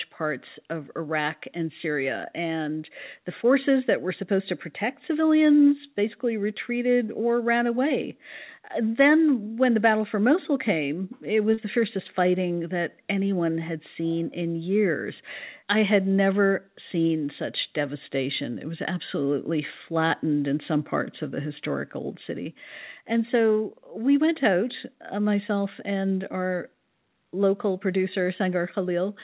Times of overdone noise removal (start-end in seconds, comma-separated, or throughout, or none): none